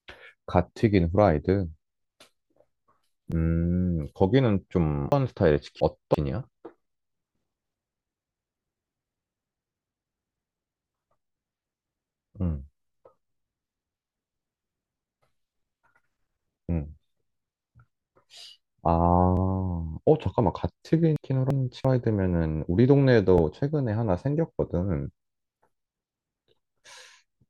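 Overlapping chunks first appear at 3.32 s as a brief click-like stutter. The audio was handled in 4 s chunks, and each new chunk began about 13 ms before the previous one ended, so that sliver plays twice at the join.

Chunks out of order follow from 5.12 to 6.14 s. The audio moves in blocks of about 341 ms, and one block arrived two blocks late, playing after the two that should follow it. This produces a jumbled passage with three hard joins.

The overlapping-chunk stutter recurs at 7.33, 11.34, 15.36 and 19.37 s, keeping its steady four-second rhythm. A second out-of-order stretch runs from 21.16 to 21.85 s, where a 341 ms block landed one block late and briefly scrambles the sound. The final overlap stutter falls at 23.38 s.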